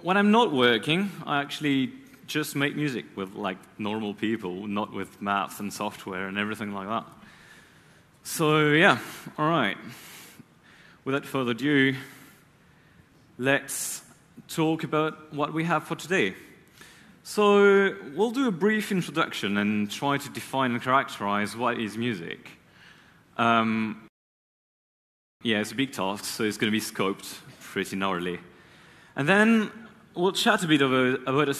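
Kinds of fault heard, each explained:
Rebuffering stall: the player ran dry of downloaded audio, so at 24.08 s the sound falls silent for about 1.3 s and picks up at 25.41 s exactly where it stopped. Unlike a dropout, nothing is missing; the gap only adds time.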